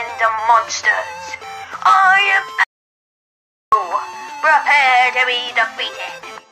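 At 2.64 s the sound cuts out mid-flow and returns at 3.72 s: an audio dropout to silence lasting about 1.09 s, likely from the input being lost while silence was written. The waveform flatlines, and the spectrogram shows a blank column with no room tone.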